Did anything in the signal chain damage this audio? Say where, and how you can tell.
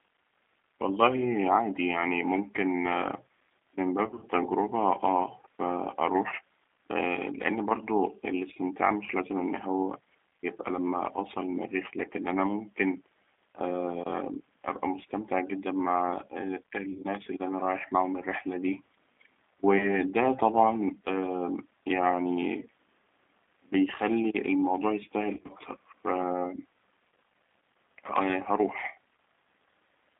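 Yes. Throughout, the speech sounds rough and slightly synthetic and is confined to about 250 Hz to 3.6 kHz. This points to the codec stage: a G.729 codec at 8 kbit/s modelling speech from a filter and a few pulses.

Brief buzzy smears that fade out occur at 4.06–4.26, 6.30–6.34, 13.54, 16.92–17.04, 19.78–19.88 and 25.35–25.52 s. This is network-stage VoIP packet loss concealed by the speech codec, which extrapolates the missing frames from the last pitch and filter.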